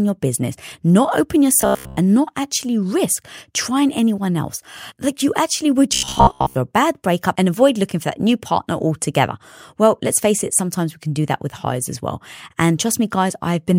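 Robotic sound from repeated short buffers at 1.61–1.97 s and 5.94–6.55 s: likely starved playback looping roughly 15 ms segments, forcing a rigid, metallic 66.7 Hz buzz over most of each span.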